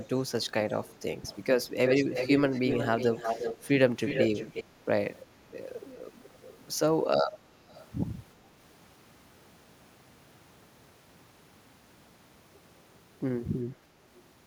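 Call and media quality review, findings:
Echo leak: delayed copy of the speech returning in faint scraps at 0.42–0.50, 0.87–0.95 and 1.26–1.38 s (around 25–30 dB down), near speech level at 1.86–3.68 and 4.03–4.64 s, quieter at 6.23–6.64 and 7.68–7.86 s. Lag 411, then 359, then 403 ms. Likely a far-end loudspeaker echo canceller passing residual. Unlike room reverb: a discrete repeat at fixed lag, not a smooth decay tail.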